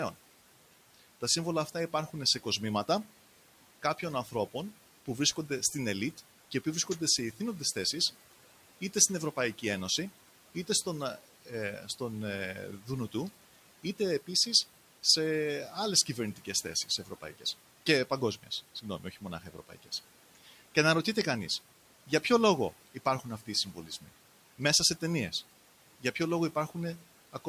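Speech with some room noise sitting about 21 dB below it, and in three spots the noise suppressor takes bits of speech for noise: 17.05–17.45 s, 19.41–19.9 s and 23.75–24.09 s. Brief stretches get pulled down by about 8, 12 and 8 dB, so those sounds come out swallowed.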